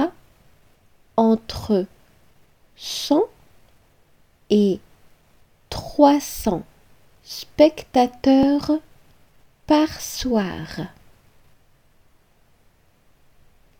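Two skips break the audio, at 8.43 s and 10.42 s. Each is a sharp discontinuity with no gap of silence, where the sound jumps forward as if a short piece were cut out and the two edges spliced together. The first skip is roughly 20 ms and the second about half that. The likely cause is a dropped buffer (overrun): the capture software fell behind, and the hardware overwrote samples before they were collected.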